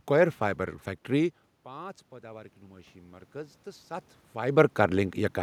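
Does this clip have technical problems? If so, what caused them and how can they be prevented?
Yes. From 1.64 to 4.18 s, automatic gain rising lifts the level by about 8 dB after the input fell by about 20 dB. Unlike the talker moving, as happens near 1 s and 4 s, the room noise swells with the voice. Fixing the input gain and disabling AGC would prevent it.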